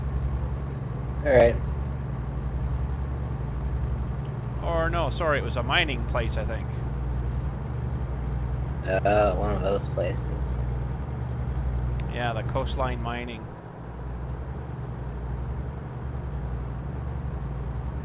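No technical faults can be heard here; the audio arrives over a call path whose band stops at 4 kHz, which fits narrowband G.711 mu-law coding at 64 kbps, and nothing in the signal departs from what that path normally delivers.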